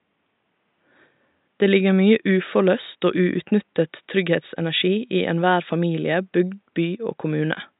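No technical faults are audible.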